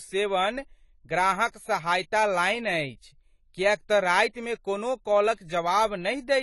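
Speech with audible AAC compression throughout. Nothing is present above 11.5 kHz, sibilants turn fizzy, and sustained sounds warble and smear. The pattern fits low-bitrate AAC-LC at around 32 kbps, where the encoder likely discarded or noise-filled the upper bands to save bits.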